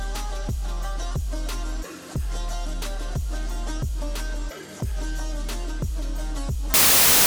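From 6.74 s to the end at 7.27 s, samples built from the wrong bytes turn the audio into loud, harsh broadband noise.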